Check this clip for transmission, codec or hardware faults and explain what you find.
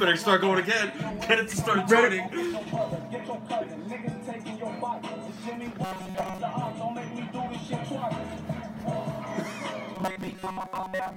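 Two stretches of robotic sound from repeated short buffers occur, at 5.84–6.41 s and from 9.96 s to the end. Most of the audio there is likely skipped while a buffer of about 5.3 ms is looped, forcing a rigid, metallic 188 Hz buzz. A spectrogram shows flat harmonic stripes at multiples of 188 Hz, and the waveform shows a short cycle roughly repeating.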